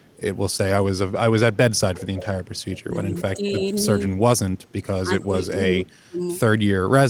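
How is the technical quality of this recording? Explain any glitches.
The speech is marred by two echo-canceller faults. An echo leak at 0.0–0.17, 1.95–2.26, 3.48–3.68, 4.63 and 5.21–5.27 s is likely a loudspeaker echo getting past cancellation. It returns a copy delayed about 241 ms at first and 281 ms afterwards, and it is strongest near 2 s. On a spectrogram it shows as a weak, shifted repeat of the harmonics. Speech is suppressed in double talk at 2.18–3.68, 4.01–4.22 and 5.01–6.24 s, likely because the canceller ducked its own talker along with the echo during overlap. The voice dips in pieces, by about 10 dB early on and by more than 30 dB in the last stretch. The waveform shows these as sudden envelope holes.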